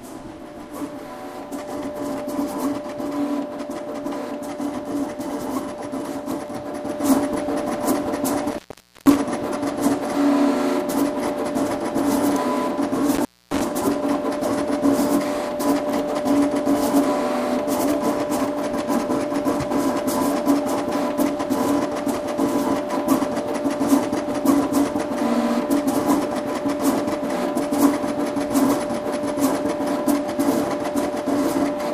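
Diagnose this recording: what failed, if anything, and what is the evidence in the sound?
Looks like an intermittent contact in the analogue wiring, a loose plug or cable. The sound drops out with crackle at the edges from 8.49 to 9.16 s (open about 0.49 s) and again from 13.15 to 13.61 s (about 0.26 s), leaving just faint hiss while the line's broken.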